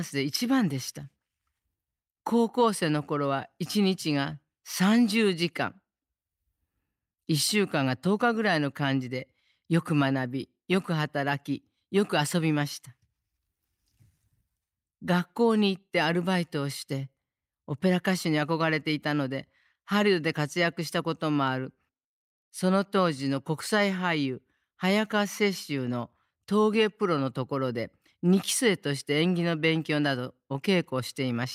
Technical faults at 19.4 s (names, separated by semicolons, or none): none